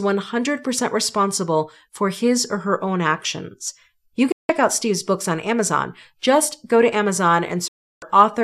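At 4.32 s the speech drops out in a digital broadcast dropout. The sound fades to silence in about 3 ms, stays muted for about 0.17 s, and resumes at 4.50 s. A second, longer hole runs from 7.68 s to 8.02 s, about 0.34 s, with the same quick fade. In both cases the receiver stopped receiving usable frames, whether from signal loss or failed checksums, and muted until valid data returned. The gap lengths fit runs of lost 24 ms frames, and the audio from those intervals is gone.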